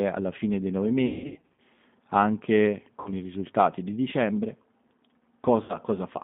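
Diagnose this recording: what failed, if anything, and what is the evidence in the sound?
Throughout, the speech sounds slightly rough and synthetic, and nothing is heard above 3.6 kHz or below about 150 Hz. This is the G.729 codec at the codec stage, and the damage is plainly audible. The band limit and texture fit an 8 kbit/s G.729A encoder, which rebuilds each 10 ms frame from a vocal tract filter, a pitch predictor and a handful of pulses rather than from the waveform itself.

Three times, the sound smears into a buzzy tone or a coloured noise that fades. From 1.06 to 1.61 s, right after "alla fine dei nove", about 380 ms of audio went missing, scattered over roughly half a second, with the longest gap 180 ms. Shorter 60 ms losses occur from 3.00 to 3.11 s, just before "i risultati di dicembre", and from 5.63 to 5.77 s. This is VoIP packet loss concealed by the speech codec, a network-stage failure. 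The decoder extrapolates its last pitch and filter while lowering the gain, and because every frame builds on the one before, the sound stays weakened briefly after packets resume.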